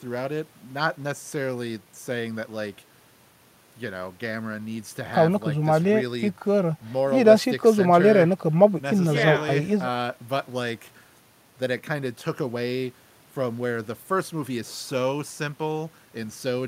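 No technical faults can be heard in this recording.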